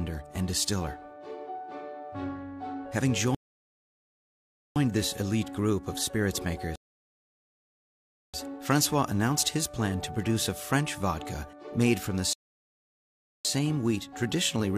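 At 3.35 s, 6.76 s and 12.33 s the audio hits a rebuffering stall. The player drained its downloaded buffer and went silent for 1.4, 1.6 and 1.1 s, then picked up exactly where it stopped. Nothing's skipped, just dead air added.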